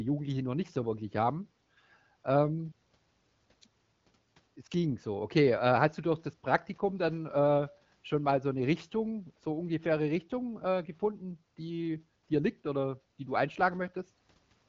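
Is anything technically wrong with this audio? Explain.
No, nothing stood out as technically wrong on listening to this speech clip.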